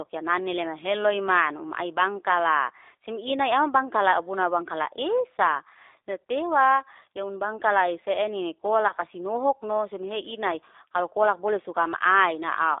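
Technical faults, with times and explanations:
Throughout, G.729 codec: the speech has been squeezed through the 8 kbit/s G.729A VoIP codec, and the damage is plainly audible. It's also confined to a telephone band of roughly 300 Hz to 3.7 kHz, so there's no real low end and no air on top. The codec doesn't send the waveform itself. It sends a vocal tract filter, a pitch predictor and a handful of pulses per frame, and the decoder rebuilds the voice from those. That's why it comes across as intelligible but a bit rough and synthetic.
8.88 to 8.93 s, VoIP packet loss concealed by the speech codec: about 20 ms of audio went missing, which fits two lost 10 ms frames, right before "si nohokno sim". The decoder didn't leave a gap. It carried on from the last pitch and filter settings it had, fading the level frame by frame, so you hear a short stretched smear instead of a dropout. Each frame is predicted from the one before, so the sound stays weak or distorted for tens of milliseconds or more after the packets come back.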